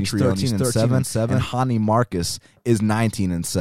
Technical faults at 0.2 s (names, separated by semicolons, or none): doubled audio track